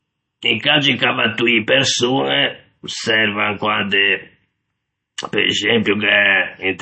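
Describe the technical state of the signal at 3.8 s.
At 3.8 s the speech carries MP3 compression damage that runs through the whole clip. Nothing is left above 8.3 kHz, and the watery, swirling texture fits a low bitrate near 32 kbps, likely from an encoder zeroing weak frequency lines frame by frame.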